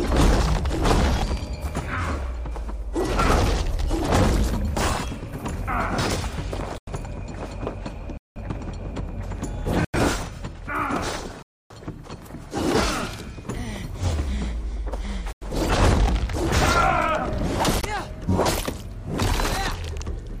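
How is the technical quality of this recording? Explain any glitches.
The recording has a recurring glitch: six blocks of digital silence. The output drops out at 6.78, 8.17, 9.85, 11.42, 15.33 and 17.81 s, lasting about 93, 186, 93, 279, 93 and 22 ms. Most of those lengths are whole multiples of one block, which fits a 4096-sample buffer the program failed to fill in time. There's no fade in or out, so the sound cuts out and back abruptly at each gap.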